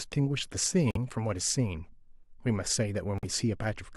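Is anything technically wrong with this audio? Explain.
Yes. The speech drops abruptly into dead silence twice, from 0.88 to 0.97 s and from 3.18 to 3.25 s, then resumes on time. This is a corrupt frame muted fault: compressed frames arrived with flipped bits, the decoder rejected them, and the player substituted silence. The gap lengths suggest roughly four frames of about 23 ms and two of about 32 ms.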